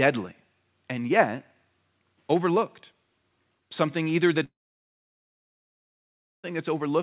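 At 4.44 s the incoming stream likely suffered a long network dropout. Two seconds of audio never arrived, so the receiver stretched the last sound into a brief fading buzz, then left 1.9 s of silence before speech resumed at 6.52 s without the lost portion.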